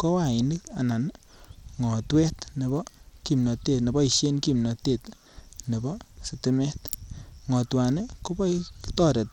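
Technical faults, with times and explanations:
Throughout, Bluetooth SBC compression: the audio was likely squeezed through the SBC Bluetooth codec at a low bit pool, the grade of damage that fits roughly 96 kbps. With so few bits, the upper sub-bands of the speech are starved and the remaining bands are coarsely quantised, with no hearing model to hide the error. The result is treble that drops out and flickers, with a gritty noise and aliasing riding on the sound.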